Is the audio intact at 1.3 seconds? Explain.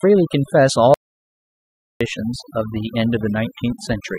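No. The input was likely lost, perhaps through a disconnect or stray mute, while the recording kept writing zeros, giving an audio dropout to silence from 0.94 to 2.01 s. About 1.06 s of speech is gone, and the sound cuts to complete silence with no room tone before resuming mid-flow.

Across the whole clip, noise removal was set far too strong. It pushes frequency bands near its noise estimate down or off, taking quieter parts of the voice with them. On both sides of the gap the background drops and breaks up into twinkling specks.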